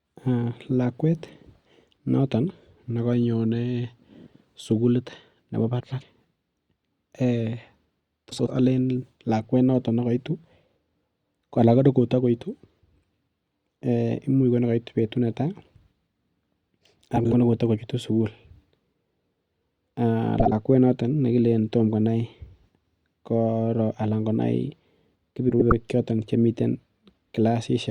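Brief garbled flutters occur at 5.8, 8.3, 17.16, 20.4 and 25.49 s. These are frames out of order: two neighbouring blocks of 52 to 105 ms were decoded swapped, so no time is lost.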